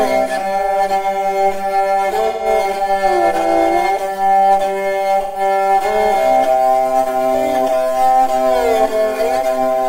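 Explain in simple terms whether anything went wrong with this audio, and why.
AAC frame loss with concealment at 2.27 to 2.46 s and 5.22 to 5.41 s: brief chunks went missing, and the player patched each gap from the preceding sound, leaving short smeared, noisy blurs.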